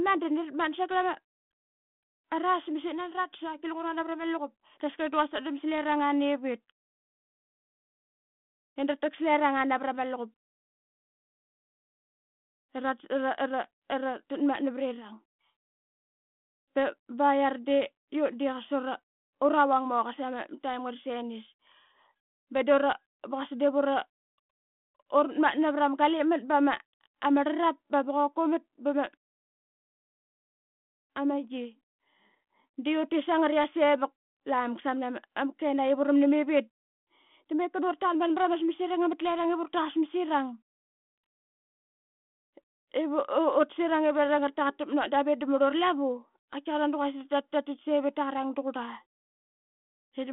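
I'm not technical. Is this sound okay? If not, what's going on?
Yes, nothing in this recording sounds wrong.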